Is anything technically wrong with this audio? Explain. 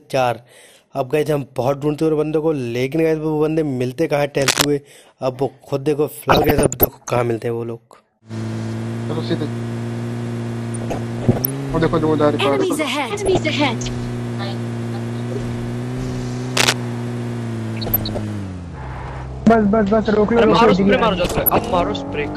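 Yes. Several faults are audible.

Throughout, the sound is dull, with a gurgling, granular texture and upper bands that flicker in and out. This is likely MP2 compression at a low rate, roughly 80 kbps, where too few bits force whole high sub-bands off and coarsely quantise the rest.

Cable scratch noise appears at 4.41 to 4.64 s, at about the signal's level, and at 16.57 to 16.73 s, somewhat louder. Both are brief rough bursts of scratching or rustling. The likely cause is a worn cable, connector or control being moved, so its contact resistance fluctuates rapidly.

DAB burbling occurs at 6.29 to 7.18 s, 10.61 to 11.50 s, 13.25 to 13.61 s, 17.77 to 18.23 s and 21.24 to 21.58 s, as short blips of noise over the programme. Bit errors that slipped past error correction corrupt samples, putting blips of noise in single sub-bands, and scale factors, making sub-bands jump in level for up to a frame.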